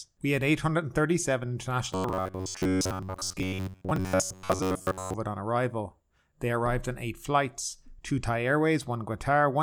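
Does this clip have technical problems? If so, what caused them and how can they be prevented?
Yes. From 1.93 to 5.14 s the speech collapses into a rigid, metallic buzz at about 93.8 Hz that still loosely follows the words: robotic sound from repeated short buffers. The likely cause is audio arriving too seldom, so the playback side loops a stretch of roughly 11 ms (one cycle of that buzz) and skips most of the real signal, around 70 percent. Unlike a codec's warbly smearing, the buzz here sits at a fixed rate. Preventing it means giving the audio path a larger or adaptive jitter buffer and enough processing headroom that new audio always arrives before the old runs out.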